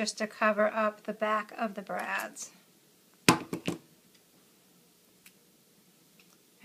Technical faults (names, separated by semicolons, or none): damaged data in a compressed stream; drift correction step